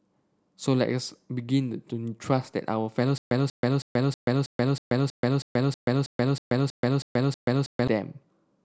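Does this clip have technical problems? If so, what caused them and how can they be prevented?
Yes. From 3.18 s to 7.88 s there is a stutter with silent gaps: a 189 ms fragment repeats 14 times, each followed by 132 ms of digital silence. The stream likely stalled, replaying its last buffer at each retry. Deeper buffering and a steadier connection prevent it.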